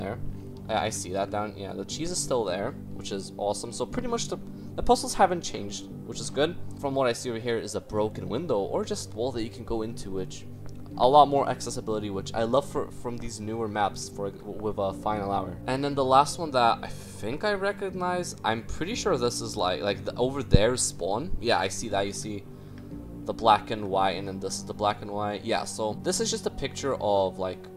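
No technical faults detected.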